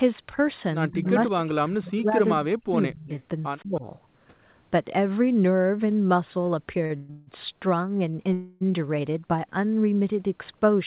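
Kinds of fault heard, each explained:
Speech suppressed in double talk: the talker dips by roughly 35 dB, fading in pieces from 0.91 to 3.1 s and again near 3.6 s, likely from the echo canceller turning down both sides while both spoke.
Echo leak: a faint repeat of the sound trails about 170 ms behind at 1.05 and 3.13 s, likely loudspeaker pickup the far end's echo canceller failed to remove.
Short stall from a late packet: a sound is held slightly too long, 38 ms at 6.86 s and 25 ms at 8.10 s, because a late packet briefly emptied the jitter buffer.
Call audio freeze: the last sound stretches into a fading buzz for 128 and 163 ms from 6.96 s and 280 ms at 8.33 s, likely held-up packets draining the jitter buffer before playback resumed.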